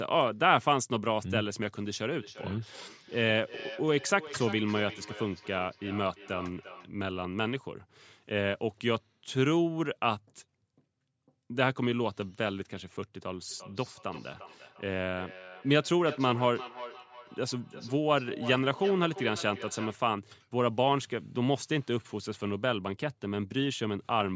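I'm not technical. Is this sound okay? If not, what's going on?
No. From 2.11 to 6.96 s and again from 13.49 to 20.07 s, each word comes back roughly every 0.4 seconds, thinner and tinnier each time. This is feedback echo between two devices: two nearby devices share the call, and each microphone picks up the other's speaker.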